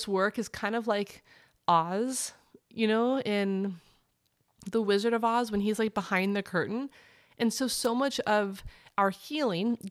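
At 7.83 to 7.87 s, just before "much of", a wireless microphone noise hit cuts across the speech as a brief swish of static lasting about 40 ms. The analogue FM radio link from the microphone momentarily lost signal strength when multipath reflections arrived out of phase and cancelled. With the carrier weakened, the receiver's own noise floor briefly came up before the signal recovered.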